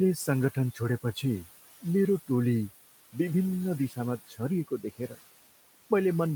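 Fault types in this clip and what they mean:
Noise suppressor artifacts: the suppressor pulls the background down by about 16 dB, band by band and frame by frame. It sinks in the pauses and comes back up under the talking. Steady room noise, sitting about 17 dB below the speech, would instead stay level.
Speech cut by the noise suppressor: the suppressor mistakes part of the speech for noise. Between 4.27 and 4.4 s and between 4.68 and 5.17 s, roughly a tenth of a second of speech in each span dips by up to about 15 dB and 13 dB, sounding swallowed.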